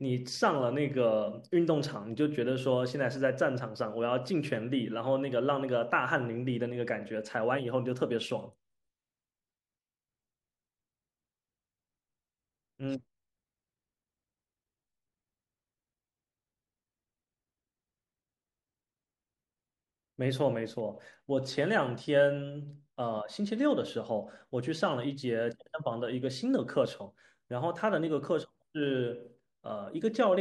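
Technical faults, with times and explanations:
No technical faults can be heard in this speech recording. Nothing in it calls for a time or an explanation.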